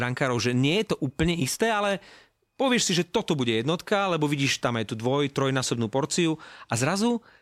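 No technical faults can be heard in this speech recording. There is nothing in it to place on a timeline or trace to a cause.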